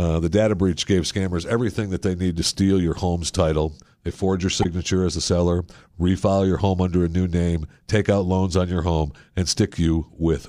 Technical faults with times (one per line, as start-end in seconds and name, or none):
4.62-4.66 damaged data in a compressed stream